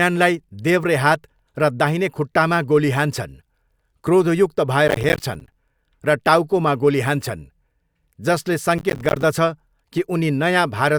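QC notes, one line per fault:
4.88–5.53 s and 8.78–9.23 s, processor overload crackle: the processor falls behind, dropping roughly twenty short buffers of around 10 ms each over a short stretch. Each one becomes a hard-edged gap of silence, so the speech tears into gritty crackle, clearing just before "र टाउकोमा" the first time.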